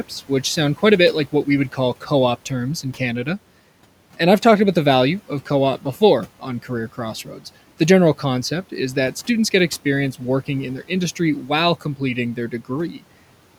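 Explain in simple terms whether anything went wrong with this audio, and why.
Between 7.25 and 7.44 s, the noise suppressor mistook quiet speech for background noise and turned it down, so about a tenth of a second sounds swallowed: speech cut by the noise suppressor.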